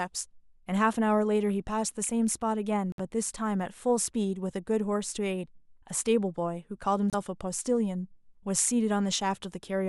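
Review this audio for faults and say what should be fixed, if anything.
The speech drops briefly to silence twice, at 2.92 to 2.99 s (a 61 ms gap) and at 7.10 to 7.14 s (28 ms), then resumes where it stopped. This is likely a Bluetooth stall: radio interference delayed packets, the headphones' buffer emptied, and playback paused until retransmissions arrived. Keeping the phone close to the headphones, away from Wi-Fi and other 2.4 GHz interference, prevents these dropouts.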